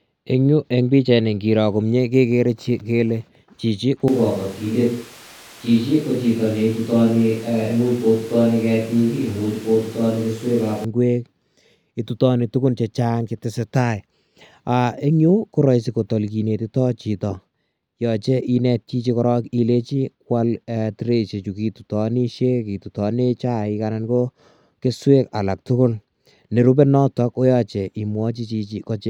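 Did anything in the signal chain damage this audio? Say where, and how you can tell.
Yes. From 4.08 s to 10.84 s the speech suddenly turns roomy and hollow, losing its low end, then snaps back at 10.84 s. The level stays about the same, but background noise rises to roughly 25 dB below the speech. This points to the capture stage: a switch to a distant microphone, likely because the close microphone dropped out. Unlike added reverb or EQ, the change comes with more room noise and hard switch points at both ends.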